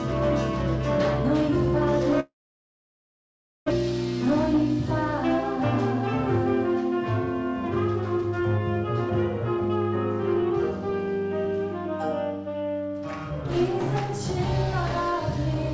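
From 2.20 to 3.72 s the audio stops: the last sound smears into a decaying buzz, then about 1.35 s of near-silence, and it resumes with roughly 1.0 s of material missing. This is likely a long network dropout, with delay shifting by around half a second.

A jitter buffer speed-up runs from 7.75 to 8.60 s at 112% speed and again from 12.46 to 13.96 s at 107%. Each time, the receiver trims short pitch-period slices, about a tenth of a second in total, so the sound hurries without changing pitch.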